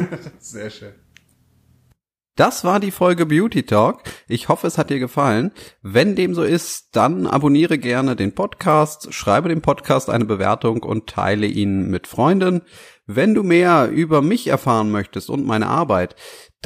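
A speech recording, with nothing technically wrong with it.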